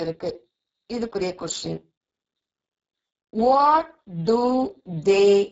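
From start to finish the speech carries heavy Speex codec damage: starved of excitation bits, it sounds hoarse and noisy, pointing to a very low bitrate near 6 kbps. A spectrogram shows smeared, noise-filled harmonics and nothing above 7.6 kHz.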